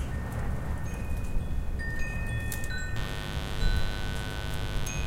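From 2.96 s to the end of the clip, mains buzz enters underneath the sound: a steady, raspy drone tied to the 50 Hz supply, sitting roughly 10 dB below the main signal. Sharp switching spikes, of the kind a dimmer, rectifier or unshielded run lets into the chain, arrive twice per mains cycle, so the interference carries a dense series of 50 Hz harmonics up to several kHz, giving it its buzzing rather than humming edge.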